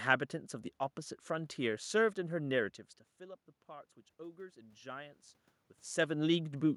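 From 3.17 s to 5.26 s the speech and the room noise behind it swell upward together, a slow lift in level of about 5 dB spread over roughly two seconds rather than a sudden jump. This is automatic gain rising: the input had dropped by about 18 dB, soon after the talker moved back from the microphone around 2.5 s, and the gain control responded by gradually raising its gain, bringing the background up along with the voice.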